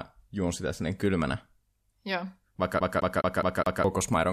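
From 2.80 to 3.84 s the disc gets stuck on one turn: a scratch keeps knocking the laser back one track at the same point of each rotation, so the player never moves forward. A loop of about 209 ms of speech plays five times over, each pass ending in a brief mute where the pickup jumps back. The result is a fast, evenly spaced stutter, the mechanical repetition typical of a skipping CD.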